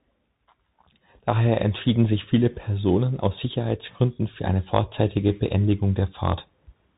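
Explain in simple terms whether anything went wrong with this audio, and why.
The speech sounds muffled and phone-like from start to finish, with scratchy s sounds and a grainy hiss underneath. That's the Bluetooth CVSD headset codec: it cuts everything above 4 kHz and crudely tracks the waveform, so sharp, loud sounds distort.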